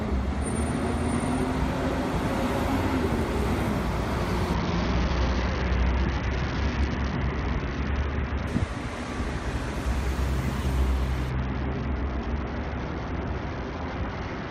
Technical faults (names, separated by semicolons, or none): Bluetooth SBC bit pool drop